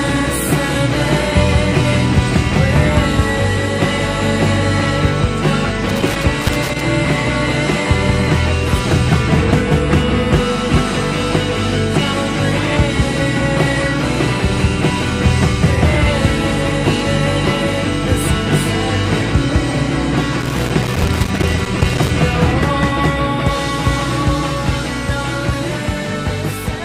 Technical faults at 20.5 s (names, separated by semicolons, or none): loose connector crackle